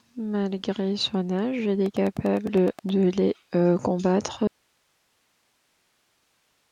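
Just after "son âge il", from 1.86 to 2.90 s, a regular train of clicks runs at 9.7 per second, about ten pops peaking around 5 dB above the speech, likely from electrical interference. At 4.47 s an audio dropout cuts the speech abruptly to a faint residue of hiss about 45 dB down that lasts to the end, likely a lost input signal.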